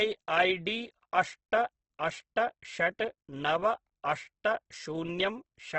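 Throughout the speech, the sound is rough and grainy. Tones turn noisy, and nothing survives above 8.2 kHz. This is likely Opus compression in its music mode starved of bits, which fits about 12 kbps. A spectrogram shows a hard ceiling over speckled, noise-filled bands.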